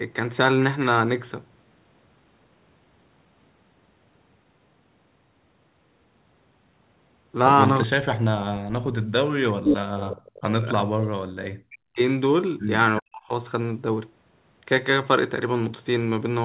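The clip is speech. Its voice drops sharply three times: 7.86 to 10.67 s, 11.32 to 12.01 s, and 13.01 to 13.31 s. Each time it falls by roughly 40 dB. This is likely speech suppressed in double talk. The echo canceller turned the talker down while the far side was also speaking. Inside the first dip, from 9.68 to 9.77 s, a brief delayed copy of the voice comes through. It lags by 372 ms and sits about 5 dB above the speech level. That points to an echo leak, where loudspeaker sound escaped the canceller and was sent back. At 10.97 to 11.04 s the room background dips by about 10 dB for around 70 ms and then returns. This is background gated by the echo canceller, which clamped the microphone while the loudspeaker played.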